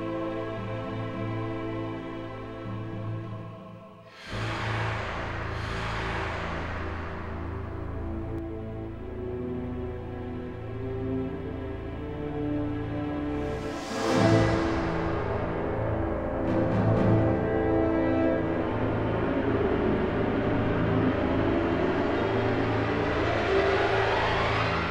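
From 4.33 s to 8.39 s the audio is doubled. A second copy, about as loud as the first, trails by roughly one and a half seconds. It has no decay or room colour. It starts and stops abruptly, likely from a second, slower capture path.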